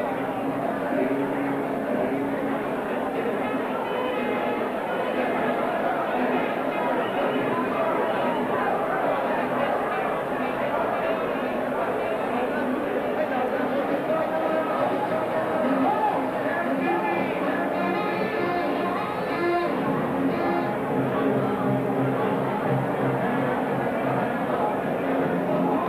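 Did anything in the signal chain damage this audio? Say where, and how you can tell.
Yes. A doubled audio track runs throughout. A full-band copy trails the sound by about a second, roughly 5 dB quieter, with no decay or room colour. That points to routing or editing, likely a second, slower capture path mixed back in.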